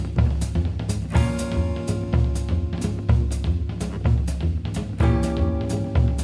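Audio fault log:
No faults detected in this audio.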